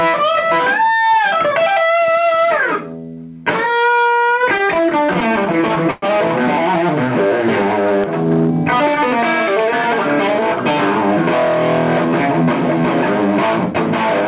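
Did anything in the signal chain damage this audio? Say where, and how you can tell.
Yes. Throughout the clip the gain swings by around 5 dB, and the dynamics sound squashed. This points to the analogue input stage, likely gain set far too high with a fast limiter repeatedly pulling it back: gain pumping.

From 4.58 to 6.04 s there are repeated stalls (stutter) in the buffer stage: 18 short holds, the longest 114 ms, about 279 ms in all, nearly a fifth of that span. The jitter buffer kept running dry, so the receiver extended the last sound each time. Nothing drops out, but the audio drags.

A loud pop sits at 8.04 to 8.06 s, a single sharp spike about 15 dB above the surrounding level, with the sound continuing beneath it. The likely cause is a voltage transient in the analogue wiring or a driver glitch. The band limit at 4 kHz fits the G.711 call codec.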